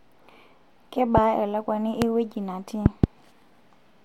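Sharp pops, roughly 20 dB above the level of the surrounding speech, cut in at 1.18 to 1.20 s and 2.02 to 2.04 s, with a quick double pop across 2.86 to 3.06 s, while the speech carries on underneath. These loud pops likely come from sudden electrical pulses such as static discharges.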